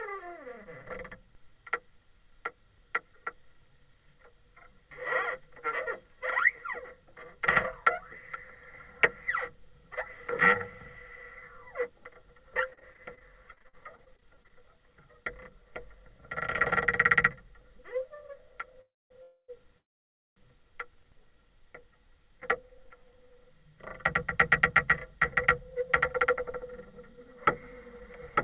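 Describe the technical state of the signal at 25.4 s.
At 25.4 s you're inside a jitter buffer speed-up running from 24.61 to 27.27 s: the receiver snips out short pitch-period chunks, about a tenth of a second in all, so the audio plays at 104% speed with the same pitch. Everything is band-limited to 4 kHz by the call codec.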